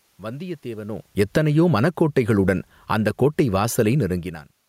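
Automatic gain falling at 1.06 to 2.02 s, by about 8 dB, then again at 2.76 to 3.13 s, by about 5 dB: the gain control judged the input too loud or its background noise too strong and eased its gain down, so the speech sinks along with the room noise beneath it.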